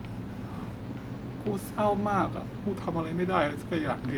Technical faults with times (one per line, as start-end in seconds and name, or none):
0.84-2.57 drift correction step